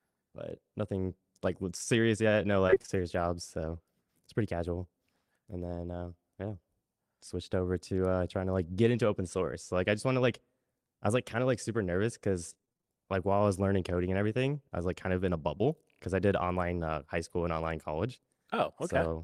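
From 2.67 to 3.03 s there is repeated packet loss, heard as robotic sound. Audio keeps failing to arrive in short bursts, each gap no longer than about 23 ms. The receiver patches every hole by stretching the last sound forward. About 120 ms goes missing, so nearly half of this stretch is filled-in sound. The result is choppy, with fragments dropping out.

The same fault returns from 12.50 to 12.86 s, and here it is denser. The holes come close together, the longest about 22 ms. Around 180 ms is lost in all, so again almost half the span is patched sound.

From 15.58 to 15.62 s there is a short concealed packet loss. About 20 ms of audio never arrived in time. The decoder continued the preceding sound to bridge the gap, then blended back into the real signal. It comes through as a brief smear or wobble, and a short consonant at that point could vanish.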